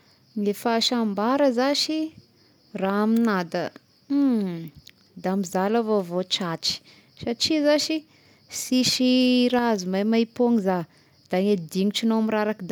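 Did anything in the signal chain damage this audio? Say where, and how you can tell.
No, nothing in this recording stood out on listening as damage from any stage of the chain.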